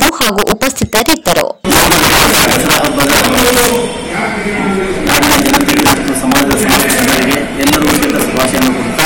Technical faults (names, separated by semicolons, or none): integer overflow